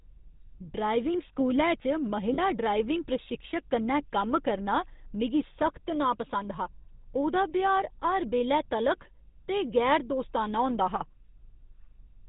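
The whole speech clip has passed through the GSM full-rate codec, and the damage is clearly audible. The sound points to the original 13 kbps GSM coder. It models the vocal tract as a filter and feeds it a pulse train, keeping only every third excitation sample. Fine detail is lost. The speech takes on a buzzy, gravelly roughness. Nothing above 4 kHz survives, so the top end sounds dull and boxed in.

From 2.34 to 2.39 s there are lost GSM frames. The gap lasts 40 ms, which fits two dropped 20 ms frames. The decoder covered it by repeating the last good frame's settings. It does not cut to silence. Instead the sound briefly freezes into a rough, metallic ring. The loss is short, so the ring stops before any full fade and normal decoding resumes.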